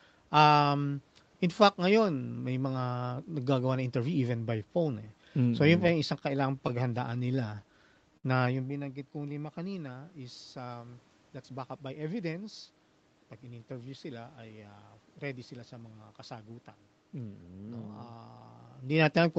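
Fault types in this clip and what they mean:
Scattered short gaps: Between 5.87 and 7.20 s, packets went missing one at a time, and the receiver covered each hole by carrying the last sound forward. There are about five small patches, the longest around 30 ms, adding up to roughly 70 ms of concealed audio, with nothing actually dropped. What separates this from a late-packet stall is the pattern: several tiny ticks and smears spread across the stretch, rather than one sound held noticeably too long.
Jitter buffer slow-down: From 6.94 to 8.12 s the receiver was rebuilding its reserve of buffered audio. It did this by repeating single pitch periods and bits of pauses many times over, inserting 59 ms in total. The result is speech running at 96% speed with the pitch unchanged, so sounds feel slightly drawn out and can warble faintly. Unlike a stall, the stretching is spread over more than a second instead of sitting at one point.
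Short stall from a late packet: At 8.17 to 8.26 s a packet had not arrived when it was due, and the buffer ran dry. The receiver held the last sound for 65 ms until the packet came, then resumed from the same place, so nothing is lost, but the playout delay grew by 65 ms. It is heard as one sound sustained too long, not as a gradual slowing. The level shift just after, near 8.5 s, is the talker moving.
Jitter buffer speed-up: Right after "lima kanina is um", from 11.29 to 12.09 s, the buffer held more audio than it aims for, and the receiver trimmed the excess. It cut out short pieces one or a few pitch periods long, removing roughly 100 ms in all. Speech runs at 112% speed at unchanged pitch and sounds hurried. This is the mirror image of the slow-down, and unlike the scattered gaps nothing is patched over. Audio is simply removed.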